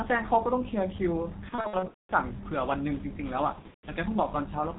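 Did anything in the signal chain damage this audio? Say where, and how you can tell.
Yes. The codec stage damaged the whole clip. The speech is muffled and hoarse. Nothing is heard above 4 kHz. Consonants are smeared and the damage is heavy from start to finish. This is the G.723.1 codec at work. It codes the speech in 30 ms frames and refreshes its model of the voice slowly, so fast detail is lost. The thin, rough quality fits its 6.3 kbit/s mode.

The network stage added two bursts of VoIP packet loss concealed by the speech codec. The first runs from 1.49 to 2.13 s. The second runs from 3.53 to 3.88 s. In each, the speech turns into a stretched, buzzy tone or coloured noise that fades. About 390 ms is missing in the first burst, scattered over 600 ms, with the longest gap 210 ms. The second loses 240 ms over 300 ms, longest gap 150 ms. The decoder fills each gap from its last pitch and filter, lowering the gain frame by frame. 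Because each frame builds on the previous one, the speech stays weak and distorted briefly after packets return.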